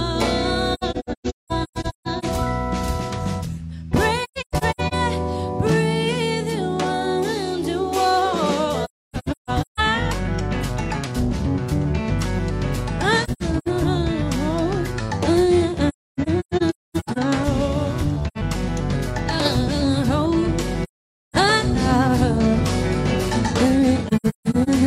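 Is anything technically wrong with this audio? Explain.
Yes. There is AAC frame loss with muting at 0.74–2.25, 4.24–4.94, 8.84–9.80, 13.24–13.68, 15.88–17.18, 18.27–18.37, 20.83–21.36 and 24.07–24.69 s. Lost frames are decoded as silence, and the overlapping windows fade the sound in and out, leaving soft-edged gaps. Several of these gaps are scattered holes, the longest lasting a few hundred milliseconds.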